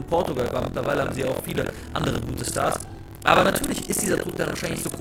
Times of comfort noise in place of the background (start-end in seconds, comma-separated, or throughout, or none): none